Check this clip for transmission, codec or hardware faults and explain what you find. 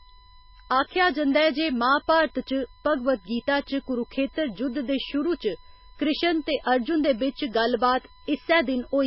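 Two faults run through the whole speech clip: a USB whine and heavy damage consistent with MP3 compression.

USB whine, throughout: current drawn by the USB bus in 1 ms frames leaks into the audio through power or ground. The result is a steady whine fixed at 1 kHz, sitting roughly 30 dB below the speech.

MP3 compression, throughout: the likely cause is an MP3 encoder starved of bits, at a rate that points to around 16 kbps. It cut the treble completely above 5.5 kHz and dropped weak frequency detail frame by frame. The speech sounds dull, watery and swirly, with smeared consonants.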